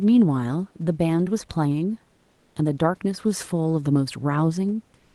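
A speech clip with one fault: comfort noise in place of the background, from 2.15 to 2.55 s. For those 400 ms, the room's real background, about 44 dB below the loudest speech, gives way to a smooth, featureless hiss. It keeps the same level, so the change is in texture, not loudness. The likely cause is discontinuous transmission in the Opus codec, with the receiver filling the pause with synthetic noise. The audio tops out around 12 kHz.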